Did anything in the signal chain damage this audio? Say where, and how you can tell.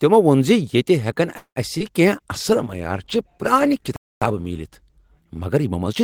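Yes. At the network and jitter-buffer stage, from 1.37 to 1.58 s the last sound carries on as a fading buzz for about 188 ms and then goes silent. It is likely a call audio freeze caused by delayed packets. The waveform shows a decaying repeated pattern, then a flat line, before the sound resumes where it stopped.

A short concealed packet loss in the network and decoder occurs at 1.78 to 1.82 s. About 20 ms was lost and replaced with continued sound, which shows as a brief smear or wobble with blurred spectrogram texture.

A call bitrate drop in the codec runs from 2.33 to 5.77 s, falling from 32 to 15 kbps and staying at the lowest rate for about 2.4 s. The audio turns rough and watery, and the spectrogram looks coarser and blotchier.

A playback stall sits at 3.96 to 4.22 s, with the output dead silent for about 254 ms, most probably from the player starving or blocking. It appears as a flat, near-silent stretch in the waveform and a blank vertical band on the spectrogram.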